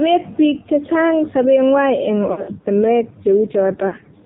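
From start to end, the speech passes through the AMR narrowband mobile codec. Nothing above 4 kHz survives, so the voice sounds thin and boxed in. The damage is heavy. The voice is buzzy and synthetic, as a few pulses per subframe drive a crude vocal tract model. That roughness points to a low mode, around 5.9 kbps.

Lost AMR speech frames follow at 2.32 s, just after "che chang sobengwai eng". The losses run to 2.51 s. About 120 ms is missing, scattered over 160 ms, with the longest gap 60 ms. That fits roughly six lost 20 ms frames. For each gap the decoder repeats the last good pitch and vocal tract settings at falling gain. The sound smears, warbles and dips, then returns rough.

At 3.88 s a shorter loss of 40 ms ends at 3.96 s. It gives a brief dip and warble.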